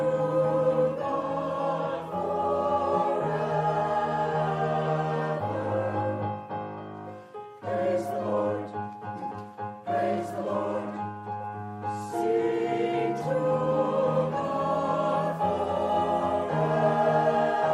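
No technical faults can be heard in the audio. Nothing in it points to a problem in how the sound was captured, processed or delivered.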